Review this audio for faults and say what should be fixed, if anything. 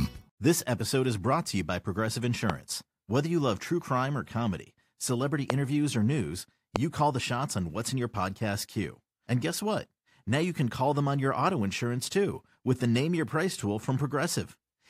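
Three loud pops stand out as sharp single clicks sitting well above the speech. They fall at 2.50 to 2.52 s, at 5.50 to 5.52 s just after "crime or comedy celebrity", and at 6.76 to 6.78 s just after "or news". Each peaks roughly 20 dB over the signal, and the speech carries on underneath. Each pop is a brief voltage spike added into the signal chain, likely from a switch, a loose connector or static discharge. To prevent this, secure all cables, avoid switching equipment while recording, and keep the rig properly grounded.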